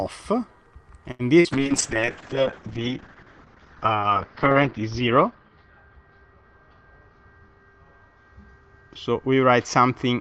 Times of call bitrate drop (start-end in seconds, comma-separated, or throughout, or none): 1.53-10.20